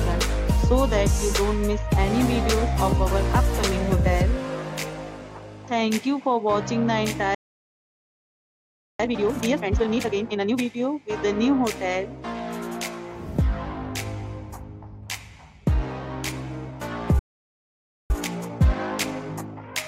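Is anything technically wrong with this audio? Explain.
Yes. Two kinds of fault occur, each twice.

At 7.35 s the sound stops dead and stays silent until 9.00 s, about 1.6 s. A second gap runs from 17.19 s to 18.10 s, about 0.9 s. These are playback stalls, likely from the player's buffer running dry or its thread being blocked.

From 9.00 s to 10.64 s, and again from 18.10 s to 19.80 s, the audio rushes forward at normal pitch. This is time-compressed catch-up: short slices are dropped and cross-faded to clear the backlog. The first runs at 2× speed and the second at 1.5×.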